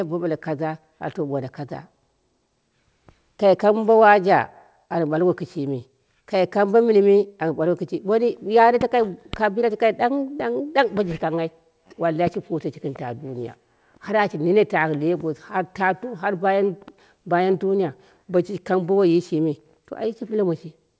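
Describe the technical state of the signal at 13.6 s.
At 13.6 s the speech signal is intact, with no dropout, glitch or distortion, only the band limit of the call path, which carries nothing above 8 kHz, consistent with a wideband codec such as G.722.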